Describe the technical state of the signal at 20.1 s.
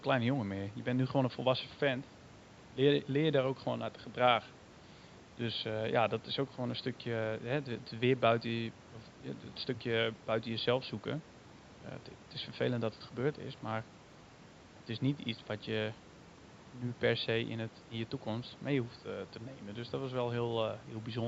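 At 20.1 s the signal is intact, with no technical fault present, only the quiet room noise sitting about 34 dB below the speech.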